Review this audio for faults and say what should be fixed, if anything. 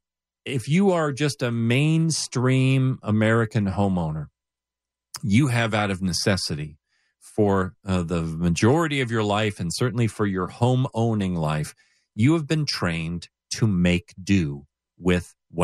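No faults; nothing needs fixing.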